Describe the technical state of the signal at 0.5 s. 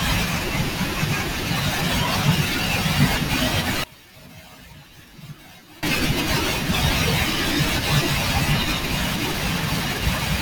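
At 0.5 s the signal is intact, with no dropout, distortion or other technical fault audible at that point.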